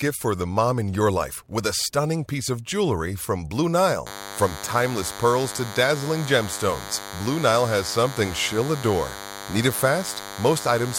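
At 4.07 s a DECT cordless phone buzz starts and runs to the end of the speech at 10.99 s. A DECT handset or base station nearby transmits a short radio burst every 10 ms. The audio circuit rectifies those bursts into sound. The result is a steady, thin buzz at 100 Hz with a dense stack of harmonics. It sits roughly 15 dB below the speech.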